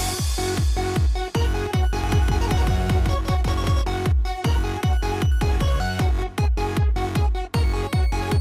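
From 2.04 s to 3.82 s there's a doubled audio track: a full-band copy trailing around 150 ms behind, roughly 5 dB down, with no decay or room colour, popping in and out abruptly. Likely a second, slower capture path mixed in alongside the main one.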